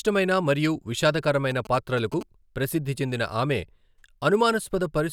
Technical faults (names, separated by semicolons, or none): GSM signalling bursts